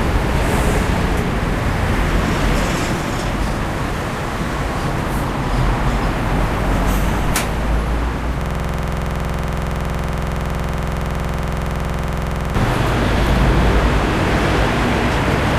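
From 8.41 s to 12.55 s the audio falls into a system hang loop. The machine or its driver stalled while the sound hardware kept replaying one 46.44 ms stretch of its ring buffer, which fits a 2048-sample buffer, roughly ninety times over. At 21.5 Hz the repeats fuse into a rough, rattling buzz. On a waveform the section shows identical blocks tiled end to end, and a spectrogram shows rigid vertical stripes spaced about 46 ms apart.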